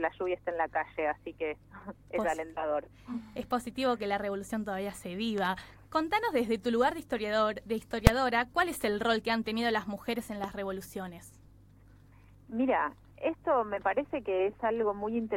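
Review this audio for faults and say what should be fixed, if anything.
A loud pop arrives as a quick double pop from 5.38 to 5.47 s and a single pop from 10.44 to 10.46 s, each about 10 dB above the surrounding sound, which carries on underneath. It is likely a voltage step from a plug, switch or static discharge, shaped by the following circuitry. On a waveform these show as tall, narrow spikes riding on the signal; a spectrogram shows thin vertical broadband stripes. Securing connectors and switching gear only while muted would prevent them.

Invalid numbers at full scale cause a single sharp bang at 8.07 s. A calculation produced infinite or invalid values that were forced to maximum level for about 2.9 ms, which fits a 128-sample processing block. The waveform shows a short flat slab pinned at one extreme value, far beyond the audio's peaks, and the spectrogram shows one intense vertical bar. 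Guarding the processing against division by zero and invalid values would prevent it.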